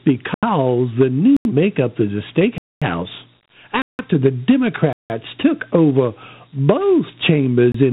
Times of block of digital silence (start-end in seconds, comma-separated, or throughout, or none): 0.34-0.43, 1.37-1.45, 2.58-2.82, 3.82-3.99, 4.93-5.10, 7.72-7.74